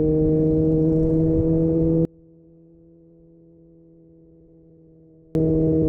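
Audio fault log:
2.05 to 5.35 s, one channel inverted: the sound collapses by about 32 dB when heard in mono, leaving only a faint remnant. The likely cause is reversed polarity on one stereo channel. Material common to both sides cancels when they sum.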